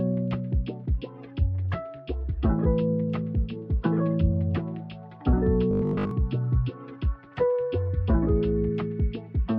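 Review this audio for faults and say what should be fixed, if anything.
Between 5.71 and 6.11 s you get robotic sound from repeated short buffers: the audio collapses into a stiff, metallic buzz at 50 Hz. That pitch means a 20 ms chunk is being looped, most likely because fresh audio wasn't arriving fast enough, so the playback kept reissuing the last block while the real material in that stretch was mostly skipped. Giving the stream a deeper jitter buffer and keeping the audio thread from being starved would prevent it.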